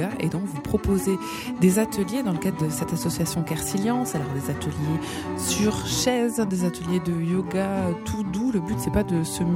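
No technical faults detected anywhere in the recording; nothing to flag.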